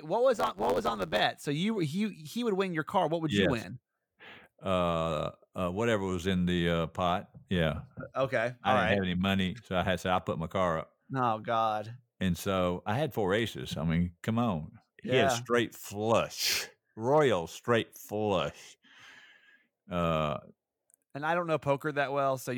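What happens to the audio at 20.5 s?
At 20.5 s the speech carries on intact, with no dropout, click, distortion or other fault at that point.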